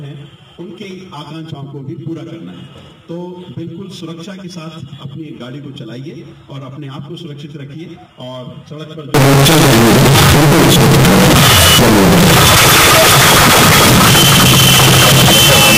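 At 9.14 s the sound turns into loud, harsh distortion that lasts to the end. Quiet stretches blast out as strongly as the loudest parts. This is the sound of signed and unsigned mixed up. The likely cause is samples being read with the wrong sign convention, which fits 16-bit data. The top bit flips, so every zero crossing leaps across the full range. Low-level detail becomes loud, harsh noise.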